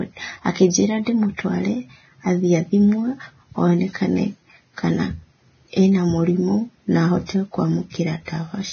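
Speech heard through heavy codec damage, most likely Vorbis compression at a low rate near 18 kbps: nothing sits above 6.5 kHz, and the remaining treble is coarsely quantised into grainy hiss. On a spectrogram this appears as a hard ceiling with speckled, noisy upper bands. Pre-echo occurs twice, from 1.36 to 1.39 s (27 ms) and, just after "ena mũrimũ na", from 7.26 to 7.29 s (34 ms). Noise from the loud attack spreads back into the quiet moment before it, so a short hiss leads each onset, seen as a low smear ahead of the waveform's sharp rise.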